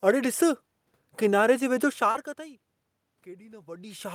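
At 2.11 to 2.16 s, just after "किनारे जे वेझो", the speech briefly smears and wavers, as if the last sound were stretched for a moment before the real audio resumes. This is short concealed packet loss: about 30 ms of the call arrived too late for the decoder, so the receiver bridged the gap with roughly 32 ms of synthesised continuation built from the preceding sound, then crossfaded back into the incoming stream.

From 3.08 s to the end of the clip, the voice and the room noise behind it swell together, climbing gradually rather than jumping. This is automatic gain rising. The input level fell by about 24 dB, and the gain control responded by steadily raising its amplification. Because the gain acts on the whole signal, the background noise is lifted along with the speech.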